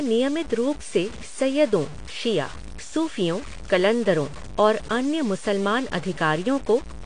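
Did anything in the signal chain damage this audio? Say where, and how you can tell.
Yes, two stages. The sample-format conversion is the first. Across the whole clip there's a gritty error riding on the speech, roughly 20 dB below it, that tracks the signal. That's likely low bit depth without dither: truncation down to something like 6 bits.

The codec is the second. The audio is plainly marked by AAC compression throughout, with nothing above 9.8 kHz. That fits a likely AAC-LC encode at around 32 kbps, where the encoder drops the top band and coarsely quantises what's left to fit the bitrate.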